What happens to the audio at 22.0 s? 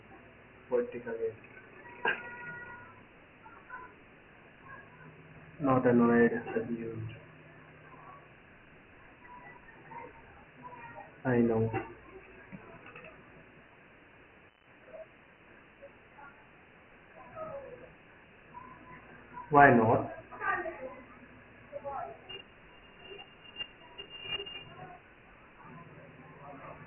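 At 22.0 s the speech carries Dialogic VOX ADPCM damage, which runs through the whole clip rather than starting there. Each sample is stored as a 4-bit step relative to the last, so the coder lags on sharp changes and leaves a heavy, gritty hiss riding on the speech. Nothing is heard above 3 kHz, which fits a 6,000-sample-per-second, 24 kbps file. That cut-off is lower than the roughly 3.4 kHz edge of ordinary telephone audio.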